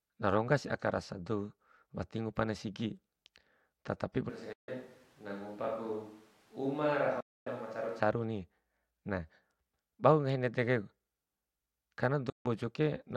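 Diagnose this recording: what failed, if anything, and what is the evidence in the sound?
From 4.29 to 8.00 s the speech turns hollow, roomy and about 10 dB quieter, with noise near 30 dB below it. That is likely a switch to a distant microphone at capture, unlike EQ, which wouldn't add room.

Bluetooth dropout at the wireless playback link, likely: clean silent holes at 4.53 s (0.15 s), 7.20 s (0.26 s) and 12.30 s (0.15 s). Speech resumes later rather than stretching or concealing, consistent with lost packets, not a network jitter gap.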